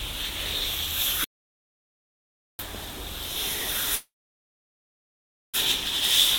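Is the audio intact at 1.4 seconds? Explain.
No, 1.4 s falls inside an audio dropout to silence running from about 1.24 s to 2.59 s. The sound cuts off mid-flow into dead digital silence, no room tone at all, for roughly 1.35 s. That's likely the input dropping out while the recorder kept writing zeros.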